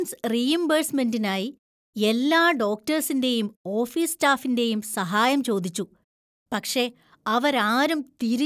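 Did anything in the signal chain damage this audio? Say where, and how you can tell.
No, nothing in the chain damaged it.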